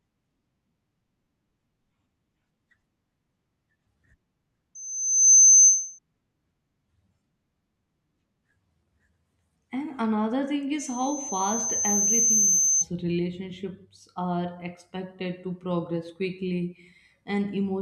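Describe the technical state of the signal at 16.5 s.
Nothing is wrong with the signal at 16.5 s; the speech is intact at that point.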